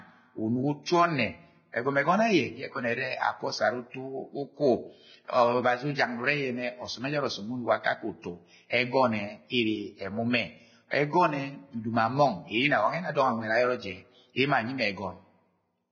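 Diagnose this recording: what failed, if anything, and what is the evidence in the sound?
Vorbis compression, throughout, at the codec stage: the speech sounds hissy and grainy, with nothing above 6.6 kHz. This is likely heavy Vorbis coding at a very low rate, consistent with roughly 18 kbps, where treble is quantised so coarsely that fine detail turns into noise.

Pre-echo, 0.83 to 0.87 s, also at the codec stage: a short hiss lasting about 46 ms comes just before a sharp attack, and the attack sounds smeared. The quantisation noise sized for the loud onset is spread across its whole transform block, filling the quiet moment before it.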